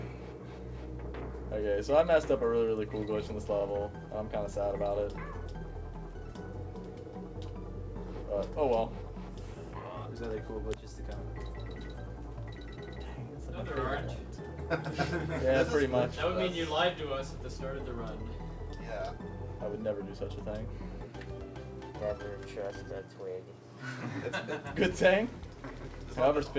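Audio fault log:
Nothing stood out on listening; the audio carries the band-limited sound of a call line, with nothing heard above 8 kHz.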